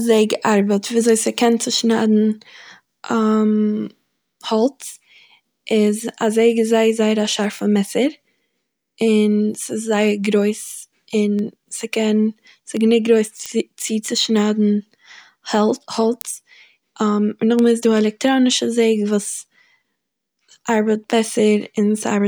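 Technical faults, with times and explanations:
0.35 to 21.73 s, word clock ticks: the receiver runs on its own clock, unlocked from the digital sender, so whenever the clocks drift a sample apart, one sample is dropped or repeated. The result is about 30 ticks, roughly every 0.7 s, fitting a mismatch near 30 ppm.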